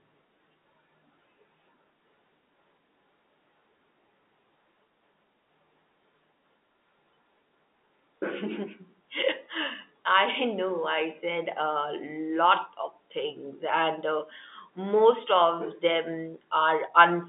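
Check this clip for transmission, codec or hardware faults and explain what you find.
I find no transmission, codec or hardware faults in this clip.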